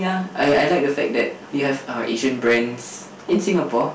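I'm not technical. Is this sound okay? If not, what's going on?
No. The speech was recorded louder than the system could handle, causing hard clipping: its loudest peaks get chopped flat throughout, adding a rough crackle to stronger syllables.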